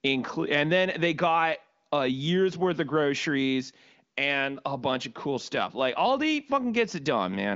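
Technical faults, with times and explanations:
The speech carries the narrow, top-limited sound of AMR wideband (HD Voice) coding, with nothing above about 7.5 kHz and any coding marks at most faint, which points to one of the codec's higher rates, around 23 kbit/s.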